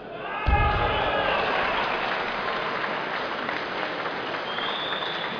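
Nothing here points to a technical fault; the sounds in this clip come across without any dropouts, glitches or other trouble along the way.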